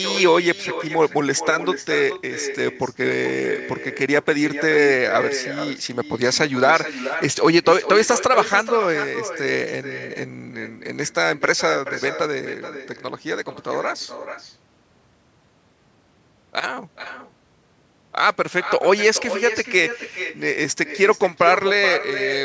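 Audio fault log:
Throughout, echo with no canceller: every phrase is shadowed, roughly four tenths of a second later, by a fainter copy about 11 dB down that sounds thinner than the original speech. The far end is playing the call through a loudspeaker, and its microphone picks that sound up and sends it back across the network with nothing removing it, so the round trip adds the delay.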